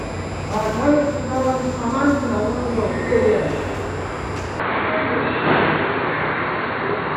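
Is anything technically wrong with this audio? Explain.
Yes. From 4.60 s to the end, the sound abruptly turns dull and boxy, with nothing above 4.4 kHz, a shift in level of roughly 5 dB, and a new noise floor around 30 dB down, with no gap at the change. The input likely switched to a poorer device.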